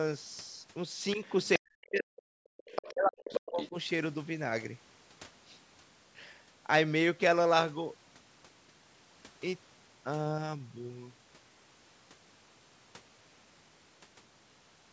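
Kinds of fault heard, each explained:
Other side's voice leaking through: A second voice sneaks in at 1.11–1.48 s, 2.57–2.92 s, 3.31–3.40 s and 3.61–3.69 s. It starts faint and gets close to the talker's level. Likely the loudspeaker's playback reaching the mic and not being fully cancelled.
Speech suppressed in double talk: The talker's voice dips slightly at 1.16–1.23 s, then nearly vanishes at 1.58–2.21 s and 2.92–3.75 s, right as the other voice is active. That's likely the echo canceller failing to tell the two apart and ducking everything.
Background gated by the echo canceller: At 2.49–2.57 s the room sound drops by about 36 dB for a blink, then comes back. The canceller clamped the mic while the loudspeaker was playing, choking off the background along with the echo.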